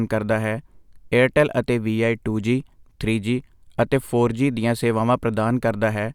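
No technical faults can be heard anywhere in the recording, so there is nothing to describe in time order.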